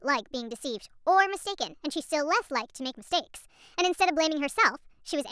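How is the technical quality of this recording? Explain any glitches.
The recording has a clear playback fault throughout. Wrong sample rate: the whole speech clip runs about 1.38 times fast and sits roughly 5.5 semitones high, which fits 16 kHz audio played at 22 kHz. Speed and pitch rise together, unlike a pitch shift that keeps the timing intact.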